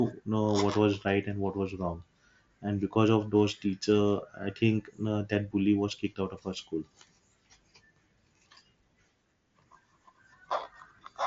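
No faults are audible in this speech recording.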